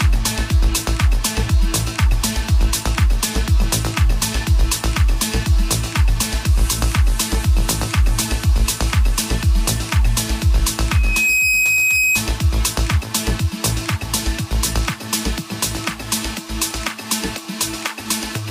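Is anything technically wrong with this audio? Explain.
Yes. There is a loudspeaker feedback squeal from 10.91 s to 12.23 s. A microphone is picking up the loudspeaker it feeds. At 2.5 kHz the loop gain passes one, so that tone keeps feeding itself. It swells in under half a second. It then holds as a piercing whistle, roughly as loud as the rest of the sound. It stops at 12.23 s.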